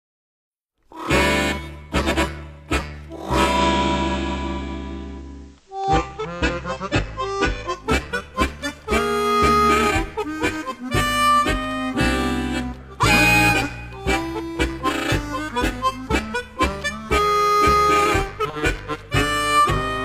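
From 3.44 to 7.86 s, hiss roughly 40 dB below the signal fades in over about 0.19 s at unchanged level: digital radio blending to analogue FM, then back.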